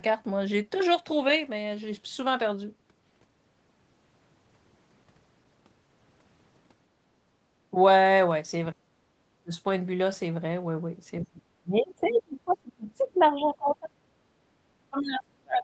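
From 8.73 to 9.53 s, speech suppressed in double talk: with both ends likely talking at once, the echo canceller could not tell the near talker from the loudspeaker echo and pulled the whole microphone signal down. The speech sinks by up to roughly 35 dB over most of that stretch before recovering.

The same failure returns from 11.22 to 13.98 s, for around two seconds in total, with dips of roughly 30 dB. Inside that stretch, from 12.03 to 12.55 s and again from 13.2 to 13.73 s, the other side's voice is leaking through. The canceller likely failed to subtract all of the far-end playback picked up by the microphone. A second voice is audible, faint, roughly 25 dB and then 30 dB below the main speech.

At 14.26 to 14.37 s the background is gated by the echo canceller. While the loudspeaker played, the canceller clamped the microphone, and the room sound drops by about 8 dB for about a tenth of a second before springing back.

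From 14.9 s to the end, speech is again suppressed in double talk, ducking roughly 30 dB as the canceller likely once more treats overlapping talk as echo. The band throughout stops at 8 kHz, which fits an Opus call codec at around 24 kbps.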